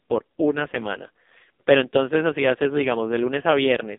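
From start to finish the speech runs through the AMR narrowband mobile codec, held to roughly 250 Hz to 3.6 kHz. Heavy damage leaves it buzzy and synthetic, which fits the lowest 4.75 kbps mode.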